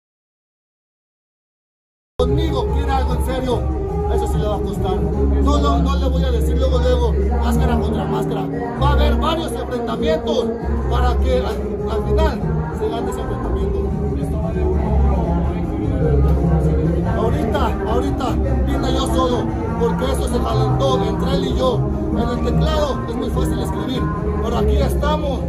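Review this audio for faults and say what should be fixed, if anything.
The clip opens in an audio dropout to silence. From 0.0 to 2.2 s there is silence, with no room tone at all. The input was likely lost while the recorder kept writing silence. Sound then cuts in abruptly at 2.2 s. To prevent it, check input connections and mute states and confirm a live signal on the meters before recording starts.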